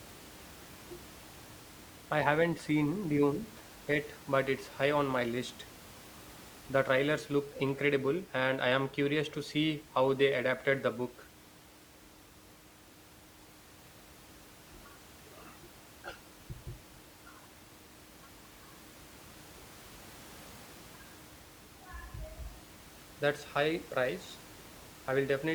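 There are no technical faults to describe in this speech recording.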